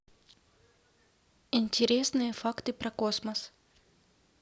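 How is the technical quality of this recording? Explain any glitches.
No glitches can be heard anywhere in the recording; the signal stays continuous and steady throughout, with nothing in it that needs explaining.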